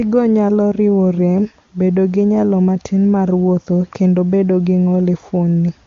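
No technical faults occur at any point in the speech, which is carried over the AMR wideband (HD Voice) codec at 23.85 kbit/s.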